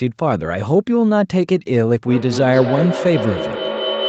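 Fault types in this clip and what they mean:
Feedback howl: a microphone-loudspeaker loop gains level each pass, so repeats grow instead of fading. From 2.07 s to the end, a tone near 3 kHz builds to about 3 dB below the speech, with repeats about 200 ms apart. It shows as a bright horizontal spectrogram band and a growing waveform envelope.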